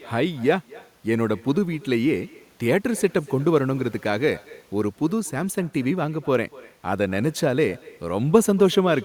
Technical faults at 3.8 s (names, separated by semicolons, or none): echo with no canceller